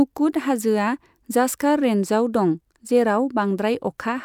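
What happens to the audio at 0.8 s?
Nothing goes wrong at 0.8 s; the speech carries on intact there, with no dropout, click or distortion.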